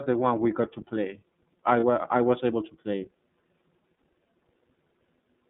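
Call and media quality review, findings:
Narrowband, slightly rough and synthetic tone throughout, nothing above about 3.7 kHz or below 150 Hz. iLBC codec, 30 ms frames coded independently, which fits the 13.33 kbps mode.

Brief held, buzzy vowel at 1.80–1.83 s, between "got to play I" and "I was able to", and again at 3.98 s. Lost iLBC frames, 30 ms each, concealed by repeating the last pitch cycle with noise; recovery immediate.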